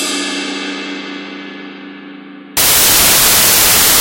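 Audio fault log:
2.57 to 4.01 s, samples built from the wrong bytes: from 2.57 s to the end the sound turns into loud, harsh broadband noise. The reader is assembling each sample's bytes wrongly, so the jittery low bits land in the high part of every value, and all you get is noise.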